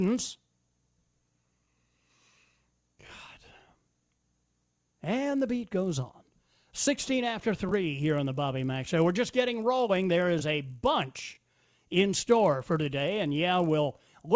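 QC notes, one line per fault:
Throughout: resampler restarted on every block. A 50 Hz buzz rides on the speech, one tick per 20 ms block, because each block was converted without its neighbours' edge samples. It vanishes in pauses, unlike mains hum, which persists through silence.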